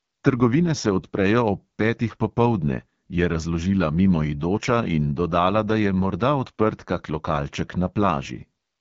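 From start to finish, the speech carries AMR wideband (HD Voice) codec damage, and it is plainly audible. The voice sounds rough and raspy, which points to one of the lowest AMR-WB rates, near 8.85 kbit/s. Nothing is heard above 7.5 kHz.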